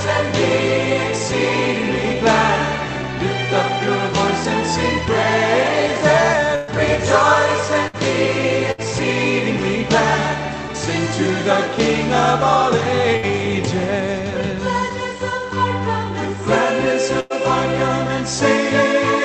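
Five bursts of packet loss occur, at 6.55, 7.88, 8.71, 13.16 and 17.20 s. Each time, the receiver extends the last sound and fades it, for 60 to 120 ms. About 60 ms of audio is then skipped. Each gap sounds like a brief held buzz or fading hiss.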